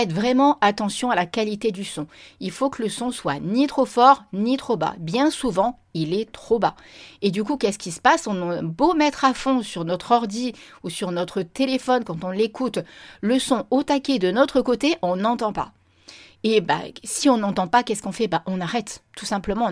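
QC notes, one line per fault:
Nothing stood out on listening.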